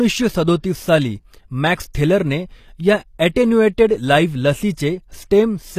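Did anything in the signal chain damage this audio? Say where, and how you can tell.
Yes, at the codec stage. The speech is bandwidth-limited with nothing above 14.9 kHz, and the codec damage is plainly audible throughout. This is likely HE-AAC compression at a bitrate around 24 kbps, where the treble is rebuilt from copied lower bands rather than coded, so its harmonics don't match the original.

Pre-echo also comes from the codec. There is a brief smear of hiss just ahead of an attack at 1.93 s, and a longer one of about 31 ms from 4.74 to 4.77 s. The transform block spreads quantisation noise sized for the loud onset into the quiet moment before it.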